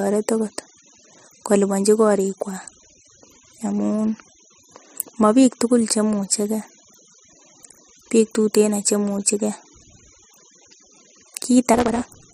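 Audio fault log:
11.73–12.34 s, block size mismatch (truncated): one stage is handing over longer blocks than the next stage reads, so the tail of every block is dropped. The buzz at about 172 Hz fits a 256-sample read, and each dropped tail leaves a seam at that rate. Because part of each block is discarded, the speech for the final stretch runs about 1.88 times fast while keeping its timbre.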